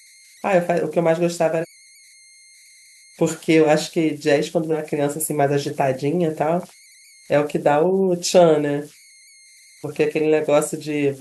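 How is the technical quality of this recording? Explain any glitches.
The recording has two faults: a faint tonal whine under the whole clip, and two places where the speech jumps forward.

Converter idle tones run throughout. With no dither, the delta-sigma converter settles into repeating bit patterns on quiet input, producing a whistle near 2 kHz about 30 dB below the speech. It is most audible in pauses and grainy under soft passages. A spectrogram would show a thin, steady horizontal line around 2 kHz that persists between phrases. The waveform would show a low, regular ripple in otherwise silent gaps.

Compressed frames were skipped at about 1.60–1.65 s and again at 4.72–4.75 s. The decoder never played those frames, so the audio leaps ahead by whole blocks. The size of the jumps fits frames of about 46 ms. Roughly 0.7 s of material vanishes at the first point and about 0.3 s at the second. 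On a spectrogram, the harmonic pattern would change abruptly. The waveform would show a discontinuity.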